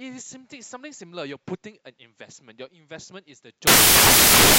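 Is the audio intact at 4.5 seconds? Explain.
No. From 3.67 s to the end of the clip at 4.59 s, the samples are built from the wrong bytes: the reader assembles each sample incorrectly, misaligned by a byte or with the byte order swapped, so the rapidly changing low-order bits land in the most significant position. At 4.5 seconds the speech is therefore replaced by loud, harsh broadband noise.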